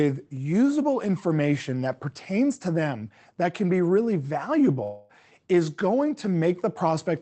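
From 4.83 to 5.11 s a long network dropout likely cut off incoming audio for about 260 ms. The receiver covered nearly all of the gap by stretching the last sound into a fading buzz or hiss, never reaching silence, and the speech resumes with that stretch lost.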